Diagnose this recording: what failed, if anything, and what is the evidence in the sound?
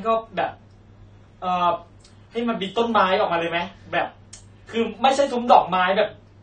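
Codec stage: the speech sounds dull, with smeared sibilants throughout, and a spectrogram shows a lowered hard ceiling with patchy bands. This is likely AAC compression starved of bits, around 32 kbps.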